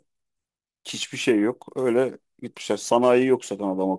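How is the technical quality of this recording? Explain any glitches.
Nothing here sounds like a glitch: the speech runs along smoothly with no dropouts, clicks or other technical hiccups to point to.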